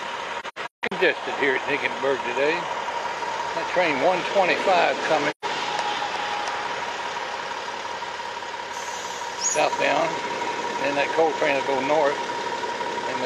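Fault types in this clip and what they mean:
AAC frame loss with muting: whole blocks of coded audio go missing and the decoder outputs silence in their place, while overlapping windows fade the sound down and back up. The gaps have soft edges. From 0.40 to 0.93 s, scattered holes total about 340 ms, the longest around 150 ms. A single gap of about 130 ms follows at 5.30 to 5.45 s. A spectrogram shows full-band blank vertical stripes, and the waveform tapers to near silence and back.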